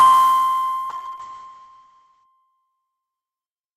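From 0.9 s to 2.31 s there is a call bitrate drop. The encoder starved for bits. The sound turns rough and muffled, with the top cut near 8 kHz. That fits a fall from 32 to 6 kbps. The worst stretch lasts about 1.34 s.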